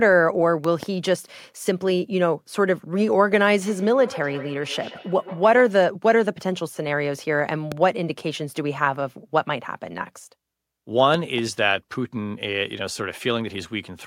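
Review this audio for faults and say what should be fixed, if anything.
Loud pops occur at 0.64 to 0.85 s (two in quick succession), at 7.72 to 7.74 s (one), and at 11.14 to 11.40 s (two), each peaking roughly 10 dB above the speech. A sudden voltage step, likely from a connector, switch, static discharge or driver glitch, entered the signal chain. Prevention: secure cabling, ground the equipment properly and update audio drivers.

A feedback echo between two devices runs from 3.67 to 5.80 s. The speech returns at intervals of around 150 ms, at most about 17 dB below the direct sound. A second device in the room replays the call into the microphone, which the echo canceller cannot remove. Prevention: keep only one device joined to the call, or mute the other device's speaker.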